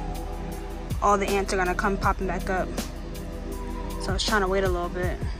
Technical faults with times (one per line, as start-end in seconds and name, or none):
none